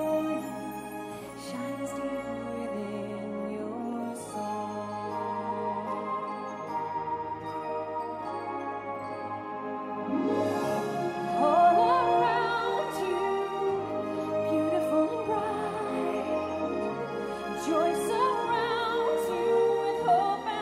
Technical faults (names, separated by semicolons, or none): none